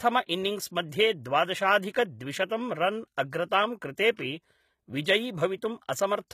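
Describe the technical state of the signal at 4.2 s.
At 4.16 to 4.19 s there is pre-echo: about 25 ms of hiss arrives just before a sharp attack, because the codec spread the quantisation noise meant for the loud onset across the quiet moment before it. On a spectrogram it shows as a faint broadband smear before the transient, and on the waveform the onset looks softened.

This moment also carries the clip-wide HE-AAC compression, plainly audible, likely at a low rate of around 20 kbps. Above the crossover the treble is rebuilt by copying lower bands upward, so sibilance sounds gritty and lispy. On a spectrogram the upper band looks blocky and repetitive and stops sharply at 14.9 kHz.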